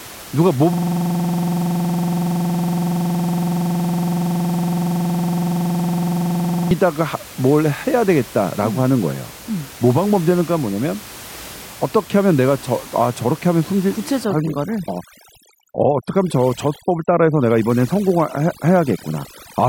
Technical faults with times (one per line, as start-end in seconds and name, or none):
0.73-6.71 system hang loop
14.25-19.68 overdone noise removal